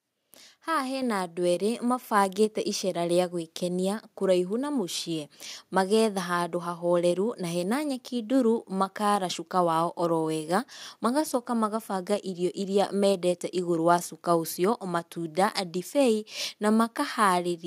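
At 1.02 s and again at 2.04 s the level jumps abruptly, by about 5 dB and then about 4 dB: the microphone volume stepped up twice as the call software judged the input too quiet and raised the device gain. Unlike a talker simply speaking louder, or a gradual automatic gain ramp, each change is instantaneous, and the room background lifts by the same amount as the speech.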